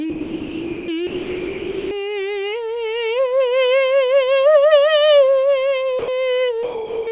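This music clip drops out four times, from 0.1 to 0.88 s, 1.07 to 1.91 s, 5.99 to 6.08 s and 6.63 to 7.07 s, with steady comfort noise in place of the music. The likely cause is sound dropped by the voice detector, which treated the music as background. Throughout, the clip has nothing above 4 kHz, which fits a G.711 call path.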